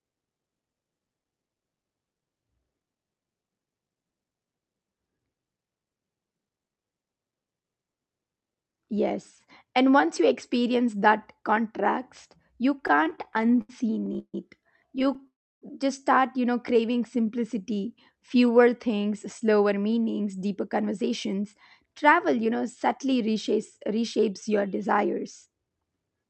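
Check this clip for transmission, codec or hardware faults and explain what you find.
Several network-timing faults appear from about the middle of this speech onward, all typical of a call path whose content stops near 8 kHz, which fits a call codec such as Opus.

Repeated stalls (stutter), 12.81–14.35 s, right after "experience that contrast you": packets arrived late and the jitter buffer kept emptying. About 20 brief holds, the longest 148 ms, fill roughly 29% of the span, so the speech drags and stutters. A shorter burst of six tiny holds, none over 12 ms, follows at 14.99–15.25 s.

Call audio freeze, 15.27–15.63 s: the sound stops for about 0.35 s, mostly silence, then resumes where it left off. It was likely caused by packets held up in transit, leaving the buffer empty.

Jitter buffer slow-down, 16.81–18.71 s, between "just start you know" and "things slower": the receiver repeated pitch periods to rebuild its reserve. 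The speech plays at about 90% speed with the same pitch, drawn out by roughly 0.19 s.

Jitter buffer speed-up, 20.29–21.42 s, after "things slower", and again 21.85–26.26 s: the buffer held too much audio, so short pitch-period pieces were cut out. The speech runs about 8% fast at the same pitch and sounds hurried.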